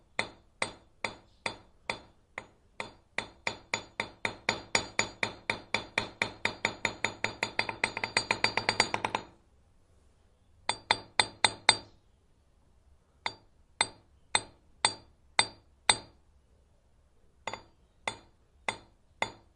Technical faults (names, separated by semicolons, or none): clock drift between sender and receiver; repeated timing corrections